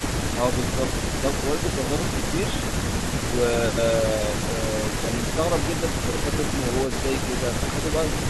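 At 1.21 to 1.26 s, and again briefly within 5.94 to 6.25 s, the speech dips by a few decibels. This is likely speech suppressed in double talk, where an echo canceller mistook the talker for loudspeaker echo. The waveform shows a shallow notch and the spectrogram a faint vertical fade.

At 6.86 to 6.91 s, a faint scrap of echo leak is heard. It is a copy of the speech delayed by 311 ms, roughly 25 dB below it. Its likely cause is residual loudspeaker pickup that the far end's canceller did not remove. On a spectrogram it appears as a weak, offset repeat of earlier harmonics.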